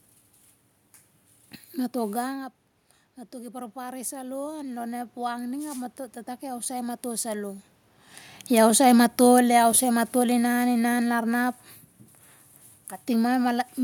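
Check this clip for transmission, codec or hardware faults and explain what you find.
Two gain-control faults are present, both from the automatic gain control reacting to level changes at the microphone.

From 3.3 to 7.39 s the speech and the room noise behind it swell together, a slow climb of about 7 dB. This is automatic gain rising: after the level at the microphone dropped by about 13 dB, following the talker moving around 2 s, the control raised its gain gradually.

From 8.5 to 11.52 s the speech starts loud and then sinks, with the background sinking alongside, by about 6 dB. This is automatic gain falling: after the talker moved again near 8 s, the control found the input too loud, or its background too strong, and pulled its gain back over those three seconds.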